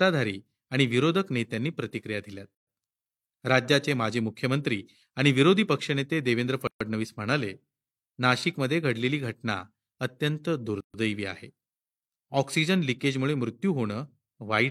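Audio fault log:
2.55–2.67, 6.67–6.81, 10.81–10.94 s: gap at a join of encoded pieces. Gaps of 125 to 133 ms with smeared edges cut into the speech every 4 s. Separately encoded segments were joined without trimming their encoder delay and end padding.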